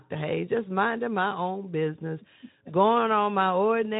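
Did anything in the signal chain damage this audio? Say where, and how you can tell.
No, nothing in the chain has damaged this speech. It has passed through a Speex codec stage working as expected, heard as a band that ends at 3.8 kHz and a light codec texture consistent with a moderate setting of around 15 kbps.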